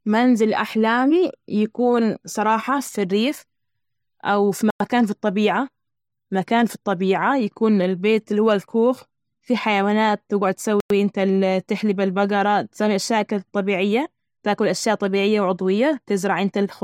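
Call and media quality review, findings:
Gap between chunks: 100 ms hard-edged silences at 4.70–4.80 s (after "أو في", before "في الطبيعة") and 10.80–10.90 s (after "الكوخ في حيوانات تجعد"). They fit 6 s chunks joined with padding or late playback start. Spectrogram shows clean vertical blank bands, and the waveform drops to near silence.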